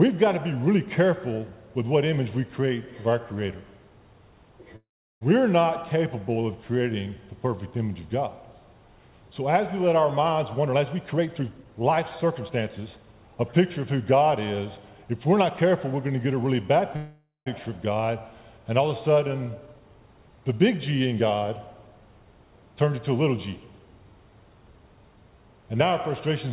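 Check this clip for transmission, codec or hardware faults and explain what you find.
Two kinds of fault are audible, on a narrowband call path with nothing above 4 kHz, which fits G.711 A-law coding at 64 kbps.

Call audio freeze, at 4.76 to 5.23 s and 16.96 to 17.48 s: the sound stalls into a fading buzz, then silence (about 370 ms the first time, 150 ms the second), and resumes where it stopped. It adds gaps of 451 ms and 500 ms with nothing lost. The likely cause is delayed packets draining the jitter buffer.

Jitter buffer speed-up, from 10.57 to 13.13 s: the audio sounds hurried, running about 17% fast at unchanged pitch. The buffer had built up excess delay, so the receiver trimmed short pitch-period slices repeatedly, removing roughly half a second in total.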